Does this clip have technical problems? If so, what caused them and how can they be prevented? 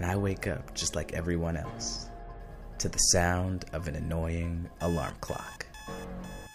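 Yes. From 5.10 to 5.79 s there is processor overload crackle: a gritty burst of tiny skips, each roughly 3 ms long, where audio buffers weren't finished in time and were simply dropped. Unlike a single dropout, the dense run of hard-edged gaps stops when the load passes. Larger buffers or lower processor load prevent it.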